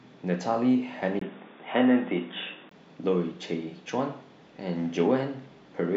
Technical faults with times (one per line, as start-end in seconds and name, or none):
1.19-2.71 input switched to a poorer device